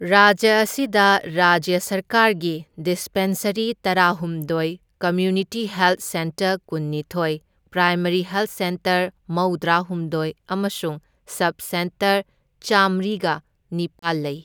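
At 13.99 s the speech drops into 33 ms of silence, likely a Bluetooth stall as the headphone buffer ran dry. It is an empty gap, not garbled sound.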